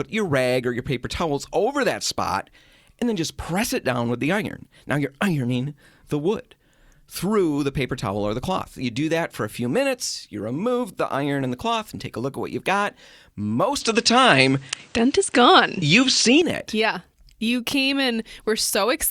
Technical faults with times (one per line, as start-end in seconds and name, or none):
13.81-16.42 input switched to a poorer device